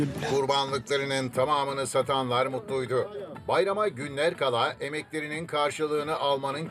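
From 1.28 s to the end, channel delay (comb filtering) sets in: one channel lags by only a few samples, under a tenth of a millisecond, so summing to mono cuts a notch near 7 kHz and sounds hollow or phasey. Unlike flanging, the notch stays fixed.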